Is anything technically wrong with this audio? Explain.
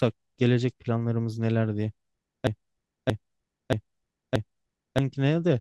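Yes. From 2.47 s to 4.98 s, a broken-record loop: one 0.63 s fragment of the speech plays back to back four times, identical each pass, and whatever should have followed is missing. Likely the stream stalled and kept resending its last buffered piece.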